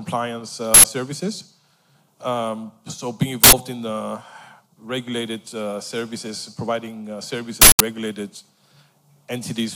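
Uninitialised buffer bursts at 0.74–0.84 s, 3.44–3.53 s and 7.62–7.80 s: blocks played out before any audio was written, so stale memory comes through as loud digital noise. The first two, each about 93 ms, fit a 4096-sample buffer. The last, about 186 ms, fits two such blocks.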